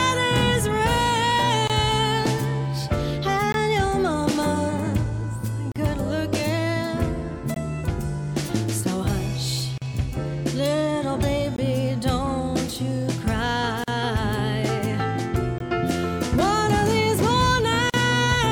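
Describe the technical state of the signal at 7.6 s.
A gap between chunks sits at 7.54 to 7.56 s, just before that moment. The audio arrived in 4-second chunks, and a 20 ms stretch of silence was left at this join. No sound is lost. It is heard as a short hole.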